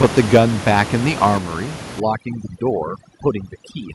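A speech recording with microphone overload, two microphone volume steps and overdone noise removal. From the start to 0.39 s the peaks are flattened and harsh. They cross the converter's limit by about 8 dB, and around one sample in twenty is cut off. The likely cause is an input volume set too high, so the loudest syllables get a crackling edge. The fault returns briefly from 0.78 to 0.82 s, about 4 dB over, with only a small share of samples clipped. At 0.37 s, right at the end of that first overload, the level drops by about 3 dB in one step. Voice and background fall together. That points to a microphone volume step down, likely made by call software reacting to the clipping. A second, deeper step of about 5 dB comes at 1.38 s. Neither step is a gradual fade. From 2.0 s to the end, overdone noise removal takes over. Before that point the room noise sits about 10 dB below the speech. 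After it, the background drops and breaks up into twinkling specks. The voice's quieter parts fall close to the noise estimate, so those bands are pulled down along with the noise.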